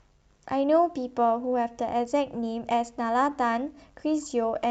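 Clock drift between sender and receiver runs through the whole clip. The sender's clock runs about 2% slow. The jitter buffer keeps draining, so the receiver must stretch the stream to keep playing. The speech carries a faint, persistent unsteadiness in pacing.

From 0.12 s to 3.76 s come repeated timing corrections. The receiver keeps repeating short pieces, playing at 98% speed. In total they add somewhere around 70 ms. The edits are small and unevenly spaced. They sound like slight hiccups in the tempo. The call codec also limits the band to about 8 kHz.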